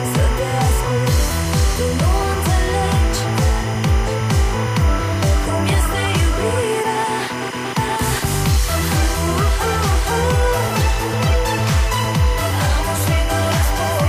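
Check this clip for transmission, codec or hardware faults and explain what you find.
Timecode bleed runs through the whole clip. A chirping warble sits roughly 15 dB under the sound, alternating between tones near 1 kHz and 2 kHz. Linear timecode from an adjacent track or cable has leaked into the audio path. Its square-wave code switches pitch as each bit changes, and the pattern repeats at 25 frames per second. That steady, rhythmic two-pitch flutter distinguishes it from mains hum, which is low and constant, and from a single interfering whistle, which holds one pitch.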